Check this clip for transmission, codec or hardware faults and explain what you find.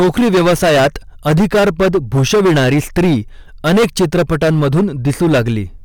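Hard clipping is present for the whole of this speech clip. The signal is driven about 16 dB past what one stage in the chain can pass, so every peak is sliced flat at the ceiling, and roughly a fifth of all samples sit against that limit. Those flattened tops generate strong harmonics high in the spectrum, so the speech carries a harsh, buzzing fuzz on every loud syllable rather than occasional crackle.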